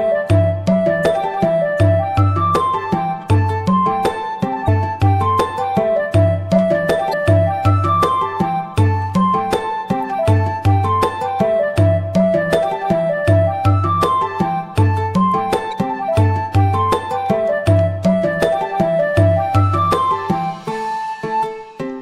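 Three brief glitches, each about 40 ms, interrupt the sound at 4.64 to 4.68 s, 7.10 to 7.14 s and 15.69 to 15.73 s. They come from damaged data in the compressed stream: the decoder hits corrupted frames, loses sync and hunts for the next valid frame header.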